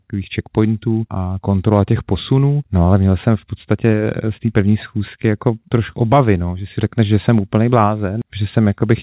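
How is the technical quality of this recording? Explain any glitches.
No glitches are audible anywhere in this speech recording.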